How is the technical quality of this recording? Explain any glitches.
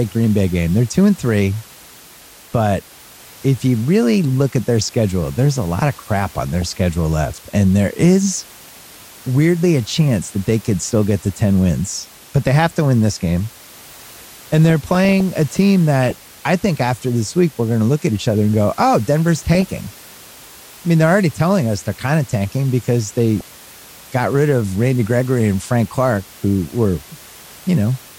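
The recording has repeated DAB burbling, heard against room noise about 24 dB below the speech.

DAB burbling occurs at 6.25–6.62 s (between "there's a lot of" and "schedule left"), 14.36–15.21 s (before "a team"), 16.03–16.25 s (before "I think after this"), 19.36–19.84 s and 23.37–23.46 s. Weak reception let a few tenths of a percent of bits slip past error correction, corrupting MP2 samples. Wrong samples put short blips of noise into individual sub-bands over the speech.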